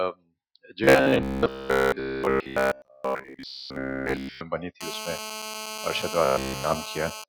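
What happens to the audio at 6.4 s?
A nearby 2G phone in a call is transmitting in bursts the audio circuit rectifies, producing a GSM phone buzz from 4.81 to 7.24 s: a steady, raspy 216.7 Hz buzz with many harmonics, about 10 dB below the signal. Between 6.25 and 6.64 s, fresh audio is likely arriving too seldom, so the software keeps repeating the same short buffer of about 15 ms. The result is robotic sound from repeated short buffers, a rigid metallic 66.8 Hz buzz, with almost none of the real audio getting through.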